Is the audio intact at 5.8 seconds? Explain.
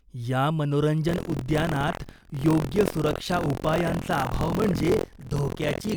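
No. Buffer tearing runs from 1.07 s to the end. Writer and reader have slipped, so roughly a sixth of each buffer replays speech from about 70 ms earlier, which fits a 1024-sample buffer. Unlike random crackle, it's a steady 43.1 Hz robotic buzz that follows the speech.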